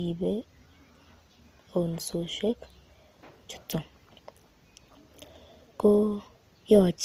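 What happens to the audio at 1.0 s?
Transcoding between lossy codecs is audible at 1.0 s, as it is across the whole clip. Nothing sounds above about 15.8 kHz, and the artefacts likely come from an MP3-style encode, possibly around 96 kbit/s, being re-encoded by a low-rate Opus-style codec that spends its bits on the earlier damage and layers its own on top.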